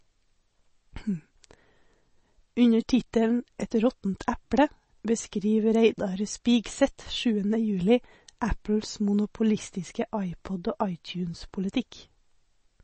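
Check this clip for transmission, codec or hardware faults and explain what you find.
One codec fault runs through the whole recording. MP3 compression, throughout: the encoder likely starved of bits, consistent with roughly 32 kbps, so it cuts everything above 8.3 kHz and switches weak frequency lines on and off between frames. The speech sounds dull and plainly watery, with smeared consonant onsets.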